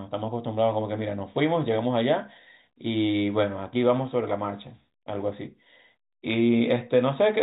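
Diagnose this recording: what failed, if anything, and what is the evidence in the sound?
A brief burst of sharp ticks and crackle sits on the speech between 6.31 and 6.34 s. These are bit errors on a digital phone line: flipped bits in the G.711 stream, roughly one in a thousand, corrupt single samples, and hits on sign or high-order bits jump to loud wrong values.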